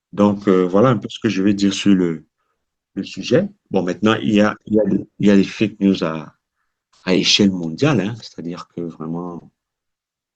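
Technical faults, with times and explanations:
No technical faults can be heard in this speech.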